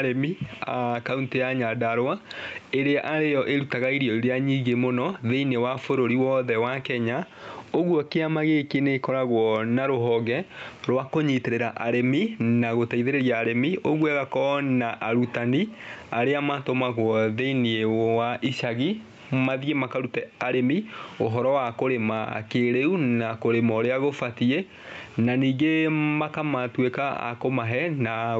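Gain pumping runs through the whole speech clip. The gain swings by around 15 dB under every loud syllable, squashing loud and soft passages together. The likely cause is input gain set far too high, with a fast limiter clamping down.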